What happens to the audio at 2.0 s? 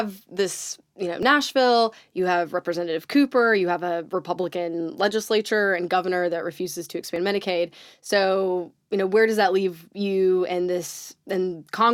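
Nothing goes wrong at 2.0 s; the speech plays through that moment intact, with no dropout, click or distortion.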